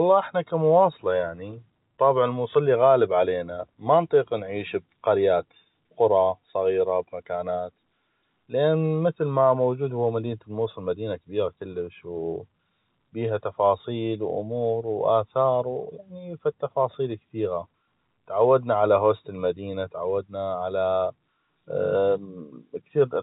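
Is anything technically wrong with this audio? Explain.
No, nothing is technically wrong: the speech carries the narrow band of G.711 telephone coding, with nothing above about 3.8 kHz and only the faint level-following grain that format leaves beneath the signal.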